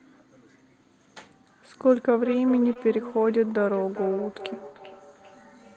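From 1.8 s to the end, each word returns roughly every 0.4 s, thin and ringing, peaking about 15 dB below the speech: feedback echo between two devices, where one replays the other's microphone.

At 2.73–2.77 s there is a brief smear where about 20 ms went missing. This is short concealed packet loss, with the decoder extending the preceding sound to cover the hole.

At 2.75–2.77 s, within that smear, a 20 ms stretch sounds rougher and noisier. This is a lost packet rebuilt from error correction, which points to a single packet whose low-bitrate copy arrived in the following one.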